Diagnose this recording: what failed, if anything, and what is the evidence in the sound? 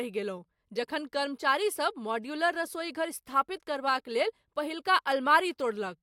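Nothing failed; the sound of this recording gives no evidence of a fault.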